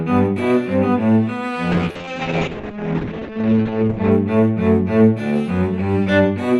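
A call bitrate drop runs from 1.73 s to 4.17 s. The audio loses its top end, sounding muffled above roughly 8 kHz where it previously extended to about 20 kHz, and it turns rough and watery for about 2.4 s before recovering. This points to the encoder's target falling from around 96 kbps to about 8 kbps after the call's bandwidth estimate collapsed, forcing coarser coding and a narrower coded band.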